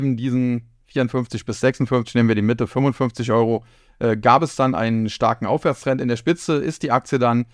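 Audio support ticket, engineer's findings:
No audible faults found in this speech recording.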